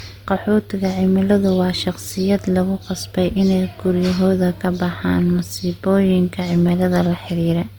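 The whole clip of speech has content only up to about 20.1 kHz. This is likely low-bitrate audio saved at a high bitrate. Traces of an earlier low-rate coding, such as Opus near 32 kbit/s, remain, and the MP3 at 320 kbit/s cannot restore them.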